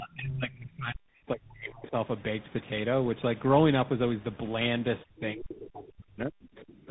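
Tandem speech coding runs through the whole of this speech recording. It passed through two speech coders in a row, one resembling GSM full rate and then a CVSD stage, with a G.711 link between them. Each coder re-encoded the previous one's damage, leaving roughened, warbly speech with nothing above 3.8 kHz. Speech suppressed in double talk appears from 0.00 to 1.94 s and again from 5.04 to 6.88 s. The level drops by as much as about 40 dB, likely because an echo canceller could not separate the near talker from the loudspeaker echo of simultaneous far-end talk and ducked both.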